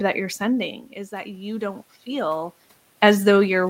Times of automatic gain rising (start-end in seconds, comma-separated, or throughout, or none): 1.10-2.62